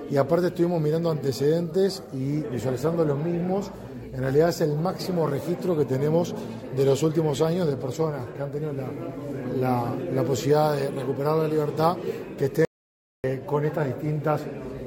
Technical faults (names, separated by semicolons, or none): audio dropout to silence